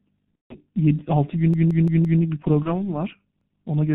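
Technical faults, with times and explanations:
Throughout: G.723.1 codec. The whole clip of speech has passed through this early internet-telephony codec at 6.3 kbit/s, and the damage is heavy. Nothing above 4 kHz survives, so the voice is muffled, and because the codec models the voice in 30 ms frames and updates that model slowly, the tone turns hoarse and consonants smear together. Unlike the local faults below, this colouring never lets up.
0.35 to 0.55 s and 2.63 to 2.87 s: VoIP packet loss concealed by the speech codec. At 0.35 s about 150 ms of audio, five 30 ms frames, went missing, and at 2.63 s a single 30 ms frame did. The decoder filled each gap by carrying on from its last pitch and filter settings while turning the level down, so the sound stretches into a fading buzzy tone or coloured noise. Because each frame depends on the one before, the voice stays weak or distorted past the gap itself, which is what separates this from a buffer repeat.
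1.54 to 2.22 s and 3.41 to 3.58 s: repeated buffer. Fresh audio failed to reach the output in time, so the device replayed its last block, about 171 ms long, which fits an 8192-sample buffer. From 1.54 s that block plays four extra times, and from 3.41 s once more. The result is an audible stutter: the identical fragment returns exactly, with a hard join at each restart, rather than decaying as concealed packet loss does.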